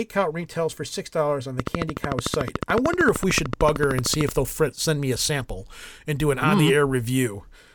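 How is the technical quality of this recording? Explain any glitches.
The recording is marred by a train of clicks running from 1.60 s to 4.30 s. Over those 2.7 seconds, sharp ticks arrive at a steady 13.4 per second, about forty in all, each with much the same shape and peaking roughly 15 dB above the speech. The even spacing and similar pulses most likely come from electrical interference from nearby equipment or a faulty connection or power supply. The ticking sits on top of the speech and stays audible through its pauses.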